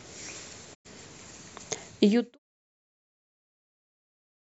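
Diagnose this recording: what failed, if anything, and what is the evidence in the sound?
Digital broadcast dropout at 0.73 to 0.87 s, in reception: the speech fades over 20 ms into silence while about 96 ms of sound, consistent with three lost frames, is muted.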